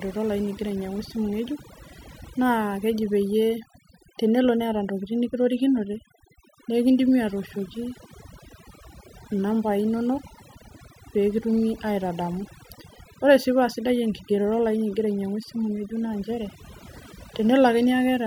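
Overdone noise removal runs through the whole speech recording, from start to finish. A noise reduction stage was pushed too hard, so each frequency band that came close to its noise estimate was pulled far down or cut out, and softer parts of the voice were cut along with the noise. Between phrases the background drops and breaks up into twinkling artefacts.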